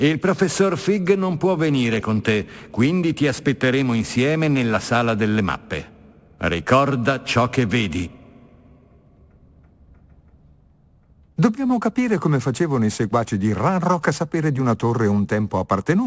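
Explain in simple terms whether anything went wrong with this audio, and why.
Aliasing runs through the whole clip. The sound seems to have been squeezed to a lower sample rate, which fits 16 kHz, without removing the highest frequencies first, so anything above 8 kHz folds back as false, gritty, metallic tones. Simple muffling would sound dull instead.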